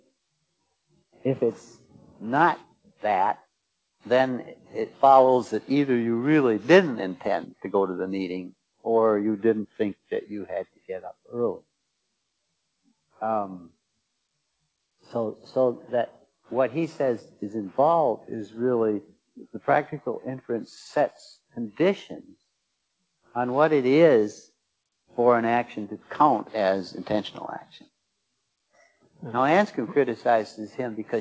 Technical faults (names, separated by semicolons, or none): sound cut by the noise suppressor